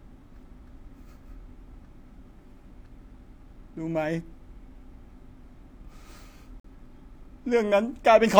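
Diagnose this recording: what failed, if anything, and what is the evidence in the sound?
Codec stage: a corrupt frame was muted at 6.60 s, an abrupt 0.1 s silence that fits a single rejected frame. Timing is preserved, unlike a dropout that shifts what follows.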